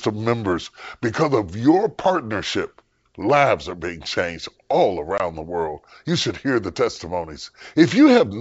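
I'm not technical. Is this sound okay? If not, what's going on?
No. Around 5.18 to 5.21 s, between "are being changed all" and "the world", there is packet loss on an ADPCM call: about one packet, 20 ms of sound, drops out as a hard-edged silent gap. The decoder briefly loses track of the signal, so the speech comes back with a small click or slight roughness before steadying.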